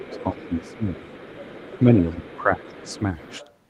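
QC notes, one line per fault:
0.00–0.85 s, speech suppressed in double talk: the talker's voice dips up to about 15 dB, likely the echo canceller turning down overlapping speech from both sides.
1.82–3.33 s, speech suppressed in double talk: dips of up to about 10 dB in the talker's voice, again likely echo suppression clamping down while both sides overlap.
0.00–3.51 s, other side's voice leaking through: a faint second voice about 20 dB below the talker, likely loudspeaker playback the echo canceller failed to fully remove.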